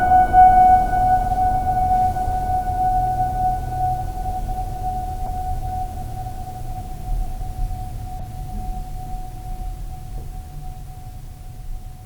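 Damaged bits in compressed frames were decoded without being rejected, so the music carries two corrupt frame decoded errors. At 5.26 s, what sounds like a single bad frame puts energy at the wrong frequencies, heard as a brief squeaky blip peaking at about -20 dBFS. At 8.20 s, a similar burst, apparently spanning a few frames, gives a slightly quieter chirp of noise at about -25 dBFS.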